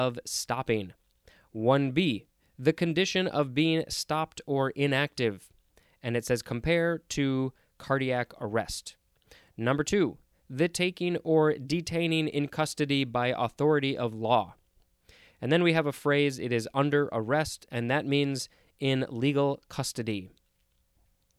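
No technical faults can be heard anywhere in the recording; the signal holds steady throughout with no disturbance.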